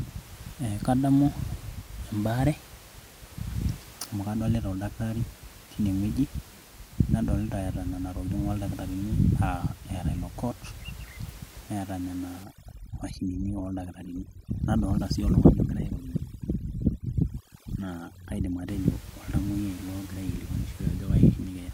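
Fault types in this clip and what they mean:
Overdone noise removal: from 12.4 to 18.7 s, after "neata nena", overly strong noise reduction strips bands near the noise estimate, leaving a background broken into twinkling specks.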